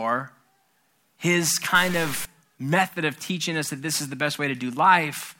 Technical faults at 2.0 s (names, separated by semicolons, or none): stuck bit